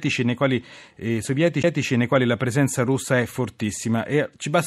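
At 1.63 s the speech hits a CD skip: the laser jumps tracks, leaving a tick and a brief mute, seen as a short waveform gap with a vertical spectrogram line.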